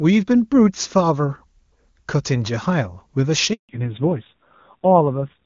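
Speech clip with a handover gap from 3.53 to 3.69 s: the sound dies away quickly and stays silent for 160 ms while the call switches networks. Unlike scattered packet loss, there is one clean hole with no concealment smearing, and the audio changes character on return. From 3.69 s to the end there is a fallback to narrowband. Before the gap the HD Voice (AMR-WB) sound is full and clear. Afterwards nothing above 4 kHz remains, and the speech turns dull and rough, which fits a low-rate narrowband codec around 6 kbit/s. A plain low-pass filter would not add that roughness or switch on at a handover.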